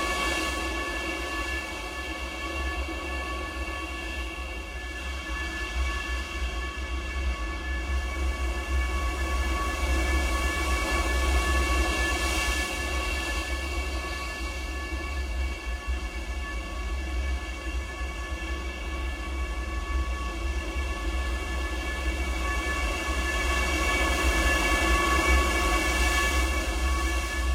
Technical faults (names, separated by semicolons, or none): none